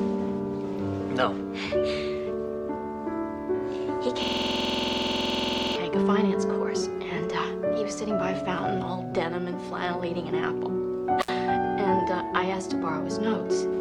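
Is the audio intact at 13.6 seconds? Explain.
Yes, the audio at 13.6 seconds is intact, with no dropout, click, distortion or other fault at that moment.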